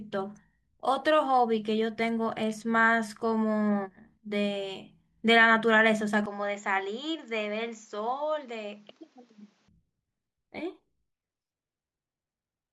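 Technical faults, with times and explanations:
6.26–9.68 s, input switched to a poorer device: from 6.26 s the speech suddenly loses everything above 7.6 kHz, drops roughly 5 dB in level, and picks up a faint new background noise sitting well below the voice. There's no gap at the change, and at 9.68 s the full bandwidth and original level snap back. That narrower, boxier stretch most likely comes from the recording briefly moving to a different, lower-quality microphone with its own noise floor.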